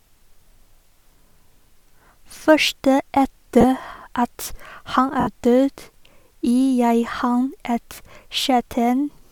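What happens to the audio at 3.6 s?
At about 3.61 to 3.64 s you get lost LE Audio frames, roughly 30 ms, which fits three 10 ms LC3 frames. The decoder covers the gap by replaying the last spectrum with randomised signs, so the speech briefly smears into a noisy blur.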